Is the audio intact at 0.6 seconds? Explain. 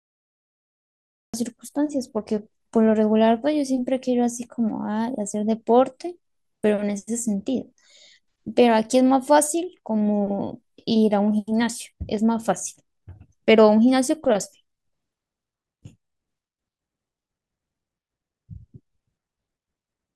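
No. At 0.6 seconds there is only dead digital silence, part of a cut-off start that runs from 0.0 to 1.34 s. The speech then arrives abruptly mid-sound with no natural attack, because the recording or stream began late.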